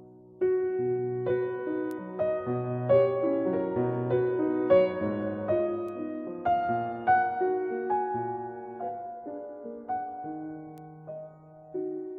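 At 1.91 s there is a single sharp tick, a bit error spike peaking at about -23 dBFS. A second follows at 5.89 s, quieter at about -35 dBFS and slightly wider, which suggests two adjacent corrupted samples. A third lands at 10.78 s, at about -29 dBFS. Each is one flipped bit in the digital data. The sample value jumps by a power of two and snaps straight back. The result is a broadband click unrelated to the surrounding sound.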